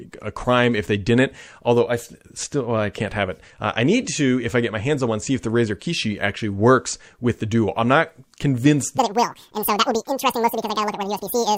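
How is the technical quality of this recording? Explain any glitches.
The recording has one clear fault: a section at the wrong speed, from 8.98 s to the end at 11.57 s, just after "I'm not convinced". The likely cause is that this final stretch was played back against a clock running at twice the rate it was recorded with, so it runs 2.0 times too fast. Because speed and pitch are tied together, the speech abruptly turns hurried and chipmunk-like, jumping roughly ten semitones higher until the clip ends.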